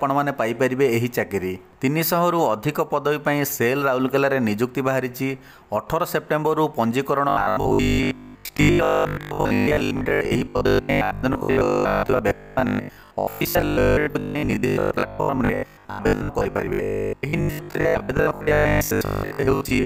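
From 7.29 s to the end at 19.85 s, robotic sound from repeated short buffers sets in: a rigid 50 Hz buzz, likely from short chunks of about 20 ms being replayed over and over, most of the time, while the true audio is skipped. A spectrogram shows evenly spaced harmonic lines every 50 Hz; the waveform shows identical repeating blocks.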